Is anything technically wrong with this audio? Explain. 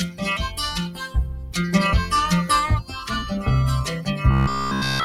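Yes, there are three problems.

Throughout, a speech-tuned noise suppressor is working on non-speech sound. It treats sustained tones and tails as noise, so the level pumps by about 10 dB. Attacks survive, which separates this from ordinary compression.

From 0.89 to 1.55 s, the suppressor cuts this passage by up to about 10 dB, over roughly half a second. Sustained parts sink and decays shorten while sharp onsets come through.

From 4.31 s to 5.04 s, the sound turns into a rigid, metallic buzz at 66.7 Hz. Essentially the whole stretch is repeated material, likely because audio arrived too late and the software looped one 15 ms buffer. Unlike suppressor pumping, a fixed pitch is imposed instead of the level simply dropping.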